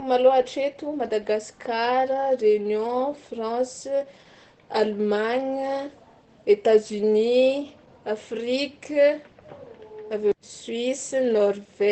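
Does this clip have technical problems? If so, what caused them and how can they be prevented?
Yes. Throughout the speech, Opus voice compression running at a low bitrate, consistent with about 12 kbps in SILK mode, cuts the band to wideband and codes the excitation coarsely. Nothing remains above 8.4 kHz, so the speech sounds muffled, hoarse and slightly robotic. Encoding at a higher bitrate, around 24 kbps or more, would prevent this.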